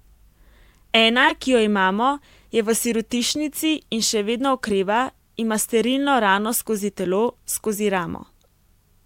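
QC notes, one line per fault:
1.22 to 1.31 s, corrupt frame decoded: a loud, harsh burst across roughly three consecutive frames. Flipped bits in the compressed data gave the decoder wrong gains and misread codes, so it rebuilt energy at frequencies the speech never had, and the damage lasts as long as those frames.
8.44 s, corrupt frame decoded: a single damaged frame gives a very faint, brief blip.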